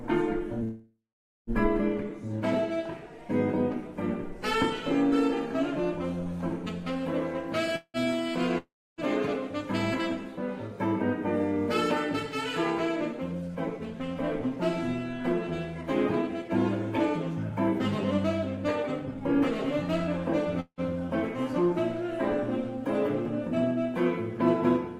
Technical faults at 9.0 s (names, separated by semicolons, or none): long network dropout